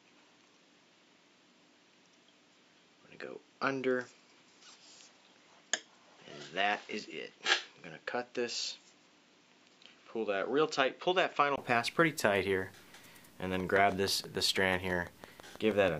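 From the start up to 11.58 s the sound is dull and boxy, with nothing above 7.6 kHz, a little quieter, and a faint new noise floor well below the signal. At 11.58 s a brief 20 ms gap comes before it opens up again, which points to the input having likely switched to a poorer device and back.

From 13.60 to 15.89 s a train of clicks ticks over the sound at a steady 6.14 per second, around fifteen in all, each poking out a few dB above the audio. That's likely interference or a faulty connection injecting pulses.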